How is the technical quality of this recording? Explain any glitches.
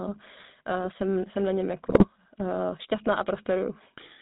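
The technical quality is poor: the speech carries plainly audible GSM full-rate codec coloration throughout, and a brief GSM bit-error burst breaks it up.

Throughout, GSM full-rate codec: pulse-driven vocal-tract modelling, nothing above 4 kHz, giving a steady buzzy, gravelly roughness, consistent with 13 kbps, not a one-off glitch.

From 1.86 to 2.05 s, GSM bit errors: corrupted filter, pitch and gain values make squawks and gargling, unlike dropouts, which go silent.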